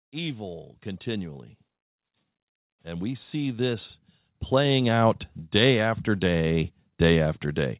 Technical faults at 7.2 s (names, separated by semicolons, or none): none